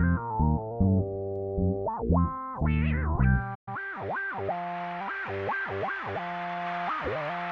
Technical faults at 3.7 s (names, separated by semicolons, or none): playback stall; time-compressed catch-up